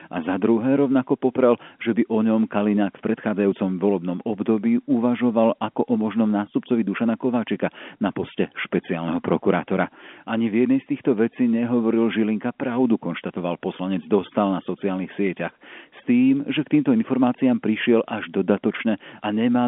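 No technical faults detected.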